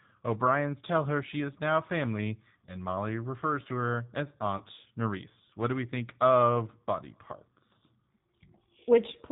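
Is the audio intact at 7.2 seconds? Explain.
No, not really. At 7.2 s, like the rest of the clip, you're hearing G.729 codec damage. Speech gets rebuilt from a vocal-tract filter, pitch predictor and a few pulses per 10 ms frame, which fits an 8 kbit/s stream. That makes it muffled above 4 kHz, slightly rough and synthetic.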